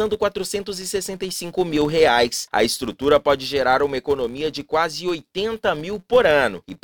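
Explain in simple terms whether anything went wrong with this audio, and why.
A filter restarted on every block spoils the whole clip. It resets each time, adding a tick 172 times per second. This fits 256-sample blocks and is heard as a buzz.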